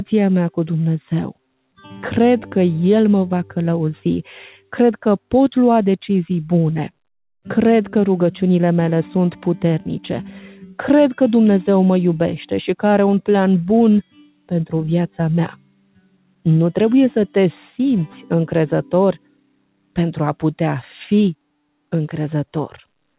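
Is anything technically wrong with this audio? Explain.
Yes. A speech noise suppressor was left running on this sound, and you can hear the level pumping by around 10 dB as it treats sustained parts as noise and keeps turning them down.

The sound gets cut by the noise suppressor at 4.57 to 4.72 s (about 17 dB down), 10.54 to 10.79 s (about 19 dB), 14.03 to 14.51 s, 15.49 to 16.46 s and 19.13 to 19.97 s (about 22 dB each). Those stretches sink in level.

The narrow, band-limited top end, with nothing above 4 kHz, comes from the G.711 A-law call codec.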